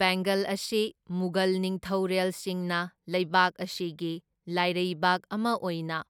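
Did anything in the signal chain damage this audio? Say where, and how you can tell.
No, nothing in this speech recording stood out on listening as damage from any stage of the signal chain.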